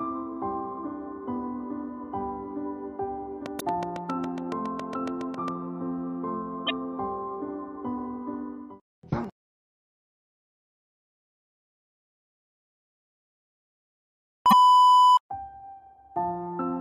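From 3.46 to 5.49 s there's a train of clicks, roughly fifteen evenly spaced ticks at about 7.3 per second, peaking around 10 dB above the sound. That steady pulse is most likely interference from nearby gear or a faulty connection or power supply. Right inside it, at 3.57 to 3.62 s, comes the first hit of damaged data in the compressed stream. The decoder chokes on corrupted frames, loses sync and hunts for the next header. The same thing recurs at 6.65 to 6.71 s and 14.51 to 14.53 s.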